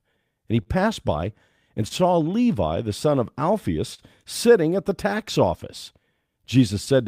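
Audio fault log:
Throughout: clock drift between sender and receiver. The sender's audio clock runs about 2 percent slower than the receiver's, so the jitter buffer keeps draining instead of holding a steady depth. The receiver has to make up the shortfall by repeating short pieces of audio, and at three points the buffer briefly runs dry. The result is a series of small timing irregularities spread unevenly across the speech.
0.18 to 6.42 s: repeated timing corrections. To keep pace with the slow sender, the receiver inserts short repeated fragments throughout this stretch, adding about 40 ms in total and bringing playback to 99 percent of normal speed. Every correction works in the same direction, lengthening the audio, but they fall at irregular intervals. Each one is small, so if they are noticed at all it is as brief hiccups or an uneven speaking tempo.
0.62 to 0.68 s, 1.88 to 1.93 s, 3.94 to 4.01 s: short stall from a late packet. 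At each of these points a packet had not arrived when it was due, and the jitter buffer ran empty. The receiver stretched the last sound to cover the gap, by 35 ms, 26 ms and 43 ms respectively, then resumed from the same place once the packet came in. No audio is lost; the sound is simply held too long, heard as a brief drawn-out buzz or dip.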